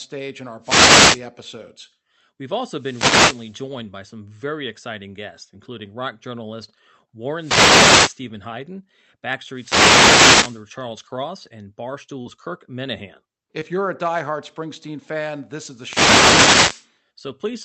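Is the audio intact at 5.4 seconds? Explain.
Yes, the speech at 5.4 seconds is intact, with no dropout, glitch or other fault at that moment.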